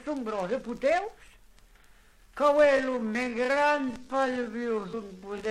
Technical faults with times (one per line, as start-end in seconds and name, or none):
2.61-5.51 time-stretched section
3.14 compressed frames skipped
4.92 compressed frames skipped